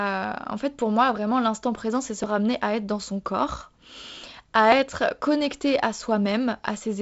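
At 2.24 s and 4.72 s the speech skips forward abruptly, losing roughly 15 ms. This is likely audio missing between chunks, dropped at 2.5-second processing boundaries.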